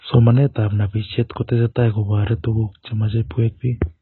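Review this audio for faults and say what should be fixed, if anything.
AAC compression, throughout the clip: the speech has nothing above 4 kHz, so it sounds dull and muffled, and sibilants and sustained vowels carry a smeared, warbling, fizzy texture. The likely cause is heavy AAC-LC encoding at a very low bitrate, around 16 kbps. Too few bits for each frame force the encoder to drop the upper band and coarsely quantise what remains, leaving gaps that swirl from frame to frame. To prevent it, encode from the original source at a much higher bitrate.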